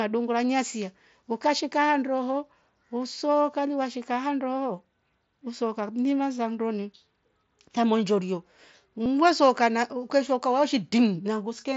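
Concealed Bluetooth headset packet loss at 9.04 to 9.06 s: about 22 ms, consistent with three lost packets, was filled by repeating recent waveform, leaving a brief buzzy patch.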